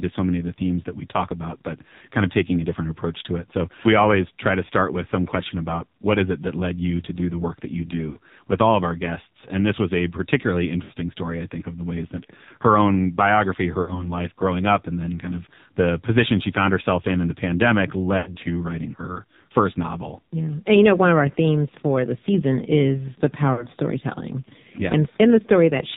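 Speech that sounds buzzy, synthetic and dull, with nothing above 4 kHz, is the signature of the AMR narrowband mobile codec, heavily damaged at a low rate that fits about 5.9 kbps. Brief dips, warbles and drawn-out fading sounds come from lost AMR speech frames, where the decoder stretches the last good frame at falling gain. These occur at 8.10–8.17 s after "the work that you" and before "with all of our", at 10.84–10.92 s after "this was a particularly", at 13.82–14.14 s after "that her own biography", at 18.18–18.36 s, and at 23.54–23.68 s.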